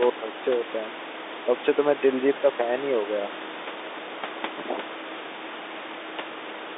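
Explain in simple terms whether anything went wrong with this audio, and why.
Nothing went wrong with this recording of speech. It has the narrow, boxed-in sound of an ordinary landline call, where G.711 telephone coding carries nothing above about 3.8 kHz, and the room noise from where the microphone sits stays quietly in the background.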